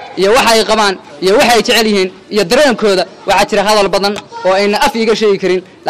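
No faults can be heard anywhere in the clip.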